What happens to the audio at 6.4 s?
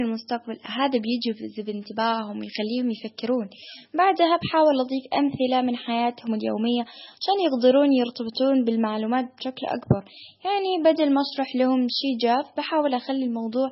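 At 6.4 s the speech carries the same MP3 compression damage heard throughout the whole clip, likely from encoding at a very low bitrate, something on the order of 16 kbps. Nothing sounds above 5.6 kHz, because the encoder drops the treble outright when bits run short. Weak frequency lines flicker in and out between frames, giving a watery, swirly texture, chirpy sibilants and smeared consonant attacks. The damage is heavy.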